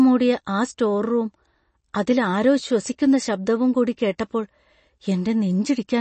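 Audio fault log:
throughout: MP3 compression. The likely cause is a lossy MP3 encoder starved of bits, which points to a low bitrate of around 32 kbps. Short of data, it has removed the treble above about 8.3 kHz and discarded the weaker frequency lines, and those lines drop in and out from one frame to the next. The speech sounds dull at the top and has a plainly audible watery, swirling texture, with chirpy metallic edges on sibilants and smeared consonant onsets.
4.18 s: pre-echo. Just after "ആരോ ശ്വസിക്കുന്ന ശബ്ദവും കൂടി", a sharp onset falls late within a coding block. The quantisation noise the codec sized for that loud attack is spread across the whole block, so it also fills the quiet stretch before it. About 10 ms of hiss arrives ahead of the attack, which makes the attack sound softened and smeared rather than crisp.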